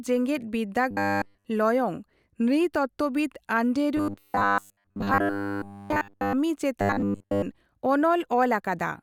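Speech with three stretches of robotic sound from repeated short buffers, at 0.91 to 1.45 s, 3.97 to 6.33 s and 6.81 to 7.43 s. The voice becomes a rigid metallic buzz at 100 Hz, likely because one 10 ms slice is looped while new audio is late. The first two stretches are almost entirely repeats, and the last is mostly repeats. A spectrogram shows flat, evenly spaced 100 Hz harmonic lines, and the waveform shows identical 10 ms cycles.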